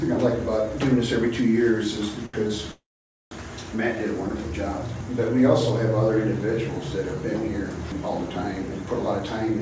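A short stall from a late packet occurs at 2.26 to 2.35 s and again at 2.47 to 2.51 s. Each time, the jitter buffer ran dry and the last sound was stretched, by 76 ms and then 19 ms, before playback resumed without loss, giving a held, faintly buzzing smear.

A call audio freeze follows from 2.71 to 3.33 s. The receiver carries the last sound on as a fading buzz that gives way to about 0.5 s of silence, inserting roughly 0.6 s of delay with nothing dropped. The likely cause is packets held up in transit, and the band-limited sound through the freeze, with nothing above 8 kHz, fits a G.722 call path.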